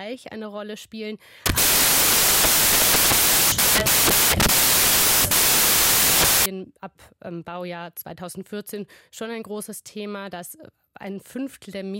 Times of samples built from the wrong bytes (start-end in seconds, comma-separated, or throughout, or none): 1.46-6.46